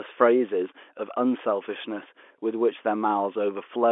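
No technical faults occur anywhere in the speech, which carries the narrow band of an ordinary G.711 telephone line.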